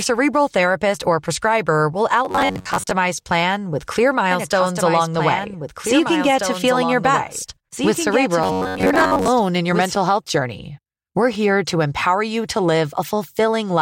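A speech clip with robotic sound from repeated short buffers at 2.25–2.91 s, just after "therapist or prescriber will", and again at 8.44–9.28 s, where most of the audio is replaced by repeats of a roughly 10.7 ms slice. This is likely from audio arriving too seldom. The repeats show as a rigid 93.8 Hz harmonic comb on a spectrogram and as identical short cycles in the waveform. A doubled audio track runs from 4.31 s, after "plan with clear", to 9.95 s, before "health journey". It is a full-band copy about 5 dB quieter and about 2 s late, likely from a second, slower capture path. On a spectrogram it appears as a shifted duplicate of the patterns, and it starts and stops abruptly in the waveform.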